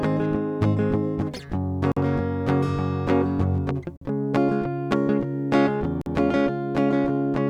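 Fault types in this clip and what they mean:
Gap between chunks: the music stops for about 48 ms at 1.92, 3.97 and 6.01 s. Each hole falls every 2 s, so playback is split into segments with silence at each join.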